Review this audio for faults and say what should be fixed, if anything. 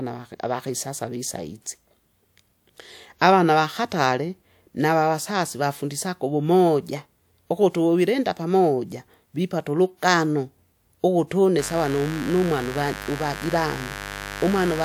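Mains buzz runs from 11.58 s to the end, only about 10 dB below the speech. Switching spikes twice per 50 Hz cycle push harmonics into the kilohertz range, giving a raspy edge rather than a smooth low hum. Keep dimmers and rectifiers away, and use shielded cabling.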